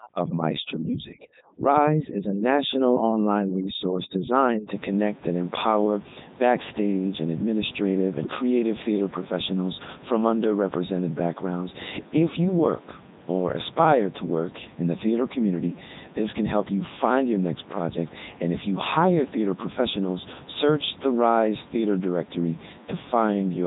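From start to finish the speech has gone through the Codec 2 vocoder, heavily mangled, robotic and buzzy, nothing above 3.8 kHz, which fits its 3.2 kbit/s mode; room noise sits about 22 dB below.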